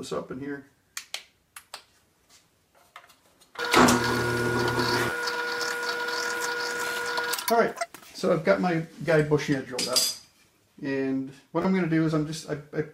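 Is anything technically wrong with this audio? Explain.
Yes, there's a repeated buffer glitch, and it shows up twice: once from 5.10 to 5.12 s and again from 11.62 to 11.65 s. Each time, fresh audio didn't reach the output in time, so the device replayed its last chunk, about 12 ms long, which fits a 512-sample buffer. That chunk plays three times with a hard join at each repeat, so with pieces this short you hear a quick buzzy click instead of a clear stutter, and about 20 ms of real audio is skipped.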